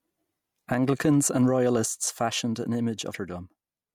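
Damaged data in a compressed stream hits this speech clip at 3.11 to 3.15 s, right after "and royalists fashioned an": corrupted frames break decoder sync, producing a brief glitch.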